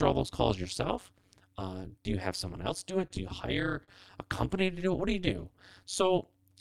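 Overlap-add ripple runs through the whole speech clip. Frames were rejoined with overlaps that do not sum to a steady gain. The level dips by about 60 dB once per frame, around 200 times a second. It sounds like a harsh, metallic buzz with extra tones around the voice.

From 3.07 to 3.91 s come repeated stalls (stutter). Packets arrived late, so the jitter buffer kept running dry. The receiver stretched the last sound across several short gaps, the longest 40 ms, filling about 83 ms in total. Nothing is lost, but the speech drags and stutters.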